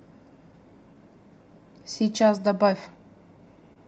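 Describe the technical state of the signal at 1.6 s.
At 1.6 s the signal sits inside a run of repeated timing corrections lasting from 0.94 to 3.38 s. The receiver keeps stretching the speech, playing it at 98% speed, by repeating short slices that add about 50 ms in total, heard, if at all, as faint hiccups or a slightly unsteady tempo.

Behind this is clock drift between sender and receiver, present throughout. The sender's clock runs roughly 2% slow, so the jitter buffer keeps draining. Those uneven, same-direction repeats are how the receiver stays in step.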